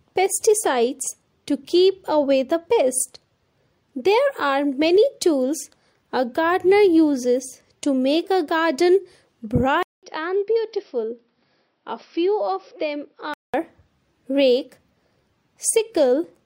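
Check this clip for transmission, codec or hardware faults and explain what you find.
One fault stands out, from 9.83 s to 13.54 s. It sounds like an input switched to a poorer device, likely a change to another microphone or a headset's call profile. The sound cuts out for 200 ms at the switch. It then returns duller and boxier, with nothing above 5.8 kHz, and a few dB quieter. A faint new noise floor sits well below the signal. The narrower band comes from the weaker device's limited capture path. At 13.54 s the fuller sound comes back.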